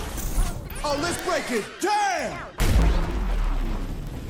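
From 0.11 s to 4.28 s, word clock ticks recur about every 40 ms, roughly a hundred sharp clicks of uneven strength. Two unlocked clocks, about 500 ppm apart, drop or repeat a sample at each slip. Spectrograms show evenly spaced thin vertical lines; waveforms show single-sample glitches.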